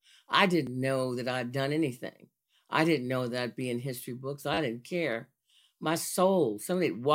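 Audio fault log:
0.67 s, repeated buffer: fresh audio reached the playback device late, so it replayed its last block once, a block that sounds about 10 ms long. So short a repeat with a hard seam registers as a single sharp click rather than an audible stutter.
4.54–4.58 s, repeated buffer: a longer delivery stall made the device loop the same 10 ms block four extra times. The back-to-back copies join into a brief buzz lasting about 40 ms, with little or no speech dropped.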